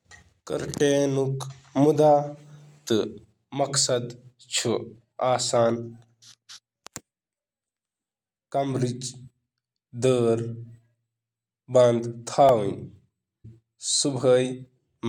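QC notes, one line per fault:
12.49 s, repeated buffer: a single sharp click with a buzzy edge in the speech, over almost as soon as it starts. The playback device ran short of fresh audio and played its last tiny block of about 1.33 ms three more times, which fits a 64-sample buffer. Each hard join between the identical copies produces the click, and at this size the repeats fuse into a brief buzz rather than an audible stutter, with essentially no speech lost.
13.44 s, stream segment skipped: the speech lurches forward abruptly, with a small blip marking the seam where the flow of sound breaks and resumes further on. The likely cause is that one segment of the segmented stream failed to load and the player moved straight on to the next, so the portion that segment held never plays and the listener hears the discontinuity as a jump ahead rather than a pause or dropout.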